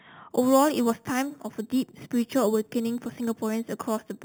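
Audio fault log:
0.30–4.24 s, imaging from sample-and-hold upsampling: A bright metallic fizz rides on the speech, tracking its loudness. Each sample was simply repeated, which fits an 8 kHz original raised to 48 kHz. Unfiltered mirror copies appear, the first spanning 4–8 kHz at about −18 dB.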